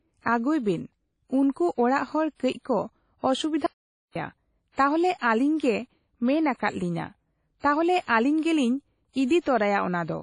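A speech recording that carries plainly audible WMA compression damage throughout, most likely from a WMA encode. The band stops at about 10.1 kHz, and the sound has the ringing, washy quality of a transform codec whose quantisation noise is spread over long blocks, which fits a low bitrate of around 32 kbps. Unlike broadband hiss from a noisy preamp, this noise rises and falls with the signal, and weak detail is simply missing rather than buried. From 2.35 to 2.40 s, just before "ᱠᱟᱹᱡ ᱠᱚ", there is pre-echo: a 46 ms smear of hiss ahead of a sharp attack. This happens because the coder sized its noise for the loud onset and spread it across the whole block, including the quiet moment before. It differs from reverb or an acoustic echo because it comes before the attack, not after it, and leaves the onset itself soft. From 3.66 to 4.15 s the audio drops out to silence for about 490 ms. The input was likely lost, and what was written instead is silence with no room tone at all. 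That dead gap separates it from a codec artefact or a level dip, and whatever was said there is gone.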